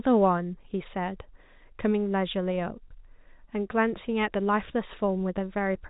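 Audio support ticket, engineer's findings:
No faults found; speech arrives over a G.711 telephone-coded path with band content stopping around 3.8 kHz, as expected for that format, with any coding noise at most faint.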